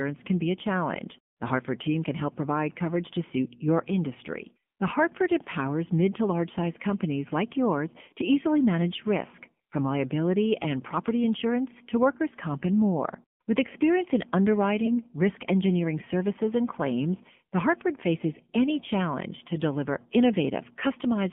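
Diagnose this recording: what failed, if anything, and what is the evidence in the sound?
Buzzy, synthetic-sounding speech throughout, confined to about 150 Hz to 3.4 kHz. This is the AMR narrowband mobile codec at the codec stage, its pulse-driven vocal-tract model audibly strained at a rate that fits the 7.4 kbps mode.

A brief dip or warble from 14.86 to 14.89 s, just before "risk engineering services and". These are lost AMR speech frames from the network stage, fitting a single lost 20 ms frame that the decoder concealed by reusing earlier settings at reduced gain.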